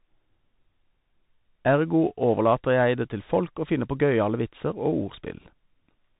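The speech passed through a Bluetooth CVSD headset codec for its whole length. This is the narrowband link headsets fall back to, which codes one bit per sample at 64 kbit/s, each bit only saying whether the waveform steps up or down while the step size adapts. The bandwidth stops around 4 kHz, so the sound is thin and muffled. Loud, bright passages outrun the step and distort, sibilants come out scratchy, and a grainy hiss sits beneath everything.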